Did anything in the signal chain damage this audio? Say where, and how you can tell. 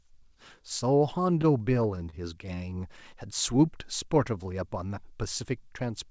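Yes, the damage is in the network and jitter-buffer stage of the call path. From 1.42 to 3.00 s the speech shows repeated stalls (stutter): twelve brief hitches, the longest about 25 ms, where the last sound is held and continued rather than dropped. Together they fill roughly 138 ms, about 9% of that stretch, with nothing actually lost. Packets were arriving late, the buffer kept running dry, and the receiver padded each gap until data resumed.

From 3.52 to 4.44 s there is a jitter buffer slow-down. The speech plays at about 92% speed with unchanged pitch, stretching that passage by 78 ms, so sounds feel drawn out. The buffer was rebuilding its reserve by repeating single pitch periods and pause fragments many times over, lengthening the audio without shifting its pitch. The band stops at 8 kHz, which fits a G.722 wideband link at 64 kbps, the codec stage through which both events passed.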